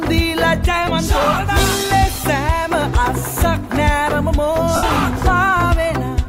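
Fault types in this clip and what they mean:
Lost LE Audio frames: the Bluetooth link dropped about 70 ms of audio, consistent with nine LC3 frames. The decoder refilled it with sign-scrambled, fading copies, leaving a noisy smear at 4.76–4.83 s.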